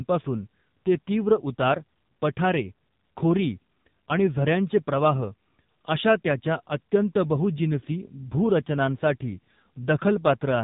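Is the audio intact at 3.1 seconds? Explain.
No. At 3.1 seconds, as throughout, the speech sounds buzzy, synthetic and muffled, with nothing above 3.8 kHz. This is heavy AMR narrowband mobile codec damage, consistent with roughly 6.7 kbps coding of a vocal-tract model.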